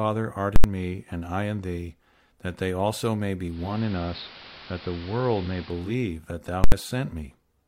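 At 0.56 to 0.64 s, just before "me and I in", invalid numbers at full scale pin an 80 ms block to maximum, giving a loud pop, dead gap, then another pop. From 3.43 to 5.98 s, after "that they also may", the radio blends from digital to analogue AM over about 376 ms: hiss creeps in well under the signal, level stays put, and it returns by "that thou". Right after that phrase, 6.64 to 6.72 s repeats the full-scale pop-gap-pop.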